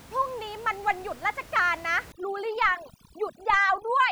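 From 2.12 s to the end, overdone noise removal switches off frequency bands near the noise floor, leaving twinkling specks and scattered isolated spectrogram dots.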